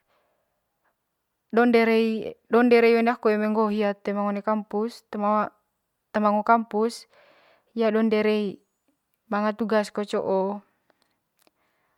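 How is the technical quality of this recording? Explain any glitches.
No technical glitches can be heard anywhere in the recording.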